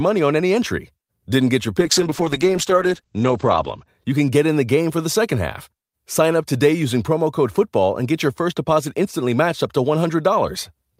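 From 1.83 to 3.93 s the speech suffers a call bitrate drop. The coarse, watery texture suggests the encoder falling from about 64 kbps to 10 kbps for roughly 1.9 s, and the audio band narrows from 20 kHz to 8 kHz, sounding muffled.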